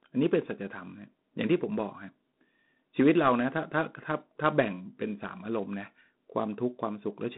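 Throughout the recording the speech has passed through G.726 ADPCM coding, which sends only a few bits per sample describing how far the signal strays from an adaptive prediction. Here the bit budget is tight, which fits the 24 kbit/s mode, so the quantisation error is large and rides on the speech as a harsh, rasping hiss that rises and falls with its level. The telephone band runs from 150 Hz to 3.7 kHz, with nothing above 3.9 kHz.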